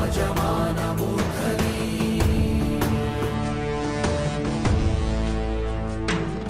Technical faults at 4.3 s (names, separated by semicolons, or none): adaptive stream at a lower bitrate